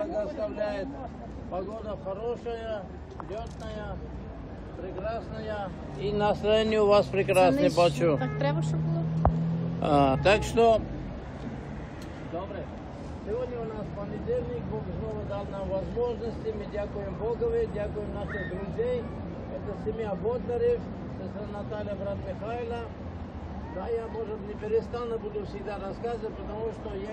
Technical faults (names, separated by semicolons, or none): compressed frames skipped